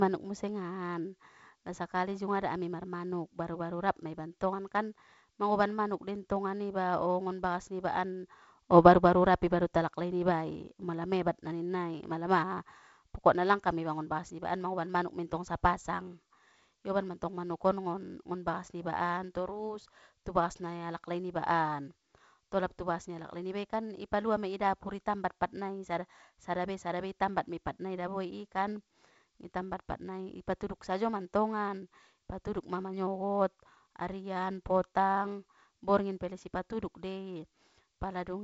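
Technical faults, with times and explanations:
No faults found: the speech carries the band-limited sound of G.722 wideband telephone coding, with nothing above about 7.7 kHz.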